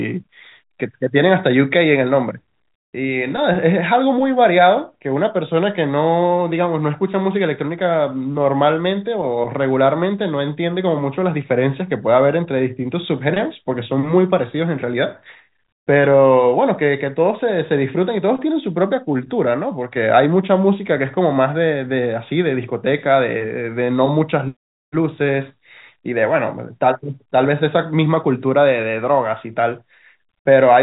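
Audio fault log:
Nothing to log here: the speech sits on an ordinary G.711 telephone path that tops out around 3.8 kHz, just what a landline call is built to carry.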